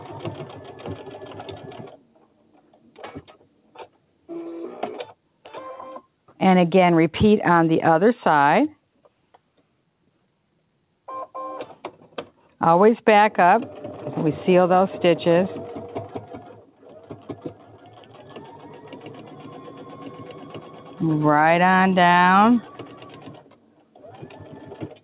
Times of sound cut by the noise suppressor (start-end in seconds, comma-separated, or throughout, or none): 1.57-2.99, 3.27-3.97, 16.15-21.00, 22.61-25.03